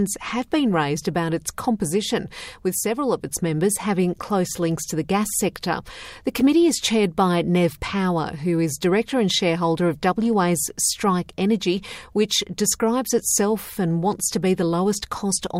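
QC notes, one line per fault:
No technical faults are audible anywhere in the audio, and the signal holds steady throughout.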